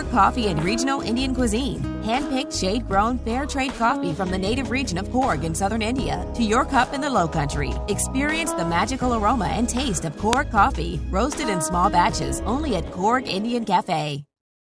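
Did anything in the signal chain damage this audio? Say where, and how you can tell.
Yes. At 10.33 s there is a single sharp, loud snap: a file header played as audio. Two WAV pieces were joined at storage without stripping the second header, so its bytes play as samples. Unlike a buffer click, it occurs once, at the join, and ignores the signal.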